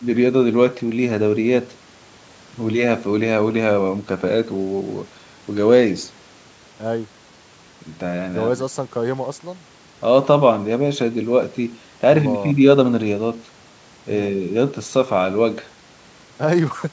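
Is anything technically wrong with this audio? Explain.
No, nothing is technically wrong with this speech recording.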